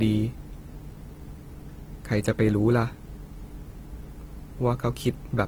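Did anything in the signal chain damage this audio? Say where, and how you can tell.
Yes, at the codec stage, throughout the speech. The audio likely went through a low-bitrate codec, around 16 kbit/s, before being saved as high-bitrate MP3. Content reaches 20.2 kHz, yet the earlier losses remain. Re-encoding cannot restore removed detail.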